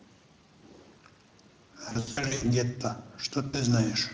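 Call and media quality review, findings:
Speex codec damage throughout: hoarse, noisy CELP texture with a thin, noise-filled top band. The steady level fits a mid-rate mode around 20 kbps, unlike the intermittent loss events.

VoIP packet loss concealed by the speech codec at 1.89–2.44 s (gaps totalling 320 ms across 520 ms, longest 80 ms) and 3.47–3.58 s (60 ms): fading extrapolated sound rather than silent dropouts, with weak recovery afterwards.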